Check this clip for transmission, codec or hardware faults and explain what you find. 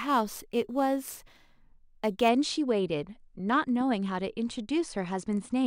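One fault: imaging from sample-and-hold upsampling, from 0.00 to 2.29 s. The sound points to a rate near 22 kHz raised to 48 kHz by simply repeating samples. This mirrors the speech spectrum into roughly 11 to 22 kHz, about 22 dB below it, giving a bright metallic fizz that tracks loudness. A spectrogram shows inverted harmonics stacked above 11 kHz. The waveform shows staircase steps.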